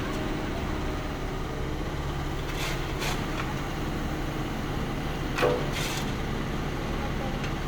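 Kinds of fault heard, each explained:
No technical faults are audible.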